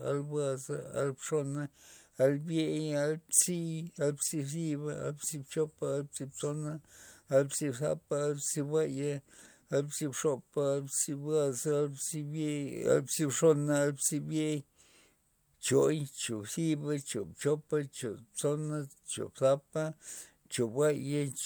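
Nothing in this recording trips any alarm, as no dropouts, clicks, distortion or other technical faults turn up anywhere in it.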